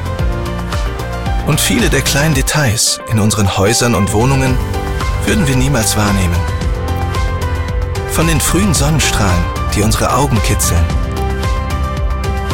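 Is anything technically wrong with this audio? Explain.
Yes. At 1.47 s, compressed frames are skipped: a couple of whole frames never reach the output, so the audio jumps ahead by roughly 5 ms, heard as a brief break at the join.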